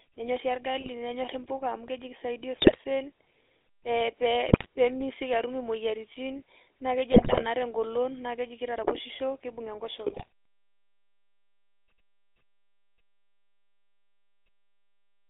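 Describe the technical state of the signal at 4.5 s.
At 4.5 s the signal is inside a burst of GSM bit errors running from 4.49 to 4.66 s. Corrupted filter, pitch and gain parameters make the decoder emit squawks, pops and gargling. Underneath, the GSM full-rate codec damage continues: a buzzy, gravelly pulse-excited texture confined to roughly 250 Hz to 3.6 kHz, with nothing above.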